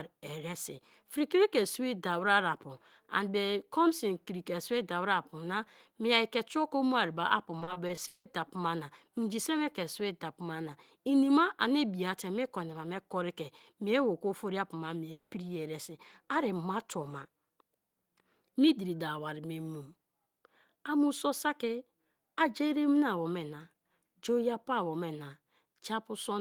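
From 7.59 s to 8.27 s the speech turns choppy, with a robotic edge as short pieces drop out and the gaps are bridged by smeared copies of the sound just before them. This is repeated packet loss (robotic sound): packets kept going missing or arriving too late, and the receiver filled each hole by extending the last audio. About 44% of this stretch is patched sound, and the longest single gap is 180 ms.

At 15.11 s the speech gives way to a buzzy continuation of the preceding sound lasting 200 ms, and it never falls to silence before the audio resumes at 15.33 s. The stretch that should have played there is gone. This points to a likely long network dropout: for that interval no audio reached the receiver, which filled the hole by prolonging the last sound until the stream returned.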